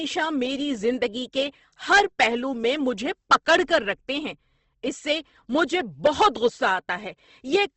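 Throughout the clip, the speech was likely passed through Opus compression at a very low rate, which fits about 16 kbps in its music mode. Starved bands get filled with folded or noisy energy, so the speech sounds grainy and rough, and nothing remains above 8.2 kHz.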